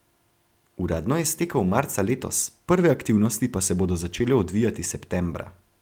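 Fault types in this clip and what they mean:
No faults can be heard anywhere in this speech recording. Nothing in it calls for a fault entry.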